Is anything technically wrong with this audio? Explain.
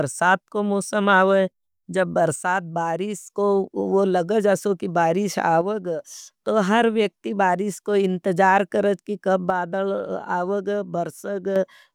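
Yes. The speech drops by about 6 dB from 2.36 to 3.30 s, 5.61 to 6.00 s and 9.50 to 11.56 s. One channel likely drops out before the mono sum.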